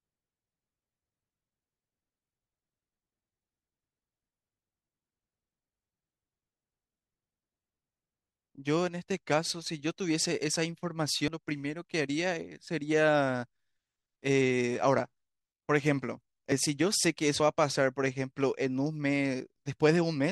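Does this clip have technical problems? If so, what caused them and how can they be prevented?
Yes. The speech jumps abruptly at 11.28, 16.52 and 17.4 s, where two non-adjacent moments are spliced together. The first skip loses about a tenth of a second, the others roughly 40 ms. A dropped buffer (overrun) is the likely cause: samples were overwritten before the software collected them. Larger buffers and a higher-priority capture thread would prevent it.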